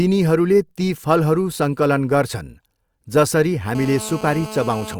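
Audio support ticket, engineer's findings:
GSM phone buzz, 3.75–4.95 s. Hard, raspy 217 Hz buzz with dense harmonics, about 14 dB below the speech, steady throughout (active call). Nearby 2G handset; RF bursts rectified in the input stage. Unlike mains hum: not on 50/60 Hz multiples, and harsher.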